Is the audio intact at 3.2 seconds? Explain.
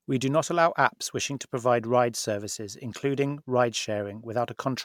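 No, not at 3.2 s. That point sits inside generation loss that runs through the whole clip. The speech sounds swirly and hollow, smeared in a way a single decent MP3 encode wouldn't explain, and the consonant attacks have gone soft. The likely cause is repeated MP3 decoding and re-encoding, something like seven passes. Each pass quantises again on a shifted frame grid, so the noise and spectral holes pile up.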